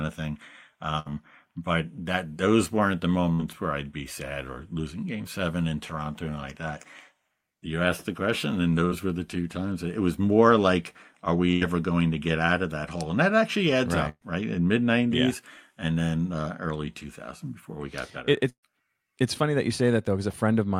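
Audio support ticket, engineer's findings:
Burst of packet loss at 0.99, 3.34, 8.85, 11.51, 14.09 and 18.49 s. The network jitter buffer concealed 48 to 133 ms gaps with held, fading sound, then skipped ahead. The two longest fade to silence.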